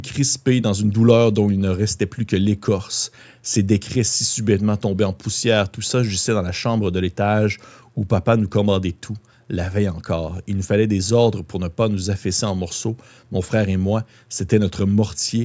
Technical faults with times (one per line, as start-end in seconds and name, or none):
none